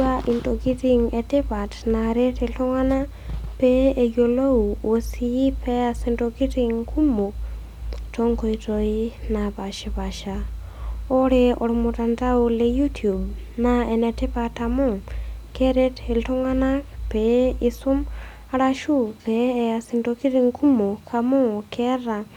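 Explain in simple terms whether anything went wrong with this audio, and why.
Nothing went wrong with this audio, because no fault can be heard anywhere in the recording.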